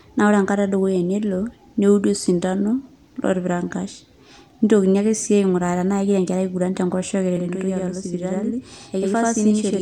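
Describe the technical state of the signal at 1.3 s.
At 1.3 s the speech signal is intact, with no audible fault at that moment.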